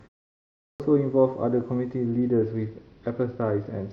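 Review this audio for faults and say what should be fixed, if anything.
The output device had gone to sleep during the 0.37 s of silence at the top and was still waking when sound resumed. This is a clipped start after a pause: from 0.37 s to 0.80 s about 430 ms is swallowed, so the speech begins abruptly without its opening sounds. Keeping the output path awake, or sending a short stream of silence before playback, would prevent this.

From 2.06 s to the end, the Bluetooth link came under congestion and the phone cut the SBC bit pool, a drop consistent with a change from 31 to 9, around 72 kbps. In this Bluetooth SBC bit pool drop, the upper sub-bands are starved and the rest are coarsely quantised, so the treble turns dull and a gritty noise sits over the speech. Reducing radio interference or distance, or fixing the bit pool at a higher floor, would prevent this.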